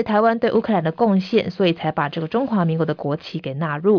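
No technical faults can be heard anywhere in the speech. Nothing marks a point where the recording or transmission went wrong.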